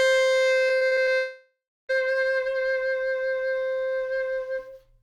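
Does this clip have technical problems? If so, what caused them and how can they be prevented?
Yes. The music has repeated packet loss (robotic sound) from 0.67 to 1.09 s. Five short holes appear in that stretch, about 160 ms missing in total, the longest 42 ms. Each hole is bridged by repeating the last bit of sound. About 37% of this span is patched rather than real. The result is choppy, with pieces of the music gone. Preventing it needs a steadier connection and a larger jitter buffer.

From 1.15 to 1.91 s there is a long network dropout. About 740 ms of music never arrives. The last sound is stretched out and fades. Then about 280 ms of silence follows. The music returns at 1.91 s, and the lost part is simply skipped. The likely cause is a stall on the network path, so no audio packets got through for that time. Preventing it needs a more reliable link, such as wired instead of wireless, with less competing traffic.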